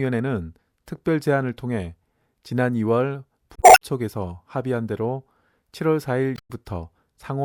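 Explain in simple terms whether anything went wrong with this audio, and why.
Brief garbled glitches break into the speech at 3.54–3.82 s and 6.35–6.51 s. This is damaged data in a compressed stream: corrupted bytes made the decoder misread frames and briefly lose sync.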